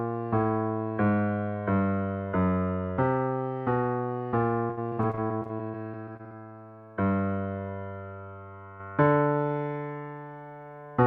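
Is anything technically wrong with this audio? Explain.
Yes. Between 4.67 and 6.32 s there is repeated packet loss, producing a robotic sound. Over that 1.65 s stretch the stream keeps dropping short chunks, about twenty gaps, the longest around 60 ms. Each gap is patched by extending the preceding sound, so roughly 28% of the span is concealment rather than real signal. Because the holes arrive in quick succession, the audio turns choppy, with pieces missing.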